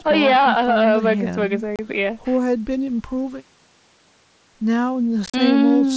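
At 1.76 to 1.79 s the speech drops into a hard-edged hole of 30 ms, and from 5.26 to 5.34 s it is chopped again, with 60 ms lost in pieces across 75 ms (the longest gap is 37.5 ms). This is unconcealed Bluetooth headset packet loss. Packets on the wideband mSBC link never arrived and silence or an idle pattern replaced them. Concealed loss would smear or repeat the sound, but here the gaps are empty and abrupt, so the second event sounds rough and crackly.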